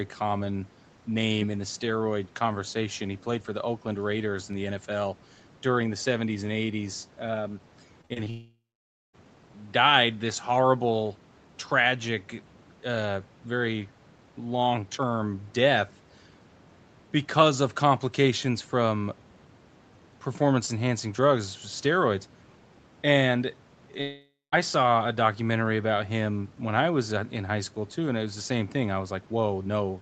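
Speech, carried over a call link whose sound stops at 8 kHz, which fits Opus at around 24 kbps. From 8.01 to 8.28 s there is repeated packet loss, heard as robotic sound. Four short holes open in quick succession, the longest about 42 ms. Each one is bridged by stretching the previous sound, so roughly 40 percent of that span is patched. The result is choppy, with fragments gone. Straight after, from 8.30 to 9.15 s, the sound smears into a fading buzz and then drops to silence for about 0.55 s before resuming with material missing. This is a long network dropout, likely a stretch where no packets arrived and the receiver could only extend the last sound until it ran out. The same thing happens again from 24.01 to 24.54 s, with about 0.21 s of silence before the audio returns.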